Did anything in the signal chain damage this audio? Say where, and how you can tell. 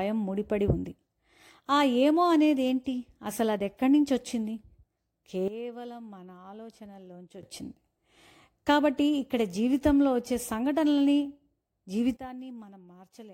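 Yes. A sudden gain jump, likely a digital gain change applied in the processing stage without a ramp, drops the level by about 14 dB from 5.48 to 7.43 s, then by about 16 dB from 12.17 s to the end. Speech and background noise fall together, abruptly.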